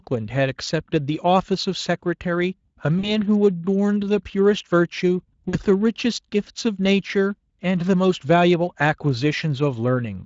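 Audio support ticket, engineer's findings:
VoIP packet loss concealed by the speech codec at 2.99–3.14 s and 5.49–5.56 s. About 40 ms lost each time. Decoder extrapolates, audio stretches into a buzzy tone or coloured noise that fades, recovers slowly. Speex path only lightly coloured.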